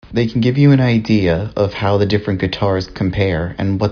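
Nothing goes wrong anywhere in this bit of speech, so there's no fault to point to at any moment.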